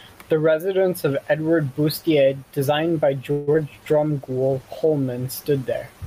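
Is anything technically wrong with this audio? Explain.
Yes, there are three call-transport faults, all in the second half of this speech clip.

From 3.31 to 3.49 s there is a call audio freeze. The last sound is drawn out as a fading buzz for about 0.16 s, and then the speech resumes exactly where it stopped, with nothing skipped. That is the key difference from packet loss. Packets were likely held up in transit so the jitter buffer ran dry, and the receiver stretched the sound to cover the wait. Everything after it runs about 0.16 s late.

At 3.53 to 3.56 s, short concealed packet loss follows. About 20 ms of audio never arrived in time to be decoded. The receiver extrapolated briefly from the preceding sound and blended back into real audio, leaving a quick smear or wobble. Unlike the freeze, this is not an inserted pause. A sliver of real speech is actually gone, so a small consonant may be swallowed.

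From 3.82 to 5.00 s, a call bitrate drop takes the encoder from 64 kbps down to 17 kbps, holding the lowest rate for about 1.1 s. With so few bits, Opus quantises coarsely and trims the upper frequencies. The speech turns muffled and watery for that stretch rather than breaking up. The degradation is a sustained change in tone with no gap or glitch, and it clears when the rate climbs back.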